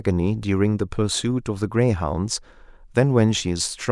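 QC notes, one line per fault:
No faults were found in this speech clip. Nothing here calls for a note.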